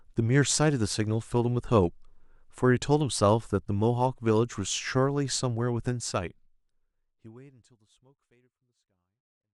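No technical faults are present in the speech, and the level eases down in an ordinary editor's fade-out from around 6 s to the end without any click or hard edge.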